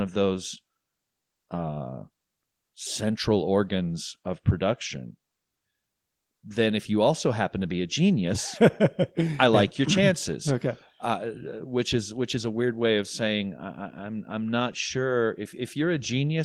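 No technical faults can be heard anywhere in this recording.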